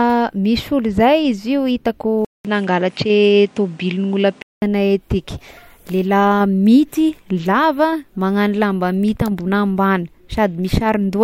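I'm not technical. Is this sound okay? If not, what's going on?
No. From 2.25 to 4.62 seconds the speech turns duller, with a faint new background noise, after a brief gap of about 0.2 seconds. This is likely an input switched to a poorer device, one that misses the top sparkle above 10.5 kHz.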